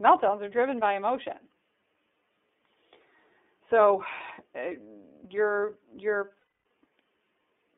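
Right from the start the whole clip runs through the iLBC codec, and you can hear it: the speech sits in a narrow band from about 250 Hz up to about 3.6 kHz, with nothing above that. Each frame's excitation is coded on its own, and the roughness fits iLBC's 30 ms frame mode at around 13.33 kbps. The damage is plainly audible, with a grainy, slightly synthetic edge on the voice.

Then at 6.39 s, right after "uh you're you're", there's a run of lost iLBC frames lasting until 6.66 s. That's 270 ms missing, about nine 30 ms frames. The decoder covers the hole by repeating the last pitch cycle blended with noise, so you hear a held, buzzy, slightly breathy vowel rather than a silence. Since iLBC frames don't depend on earlier ones, the voice snaps back cleanly once packets resume.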